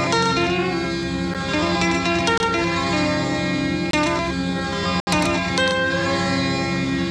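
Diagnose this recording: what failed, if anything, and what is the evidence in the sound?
The music drops out four times in a block of digital silence, a driver or buffer underrun: an 8 ms tick at 1.34 s, 23 ms holes at 2.38–2.40 s and 3.91–3.93 s, and a 70 ms gap at 5.00–5.07 s. The two 23 ms gaps fit a 1024-sample buffer left unfilled in time. On a waveform each is a flat silent line with abrupt edges; a spectrogram shows blank columns.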